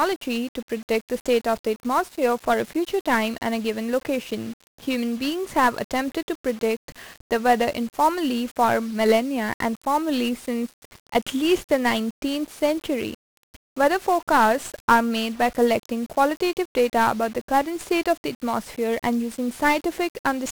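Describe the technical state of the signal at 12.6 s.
At 12.6 s the speech carries 1-bit DFPWM compression, present across the whole clip. Each sample drives a single adaptive step up or down, so heavy broadband quantisation noise fuzzes and crackles the signal and hiss swamps the treble, consistent with roughly 48 kbps.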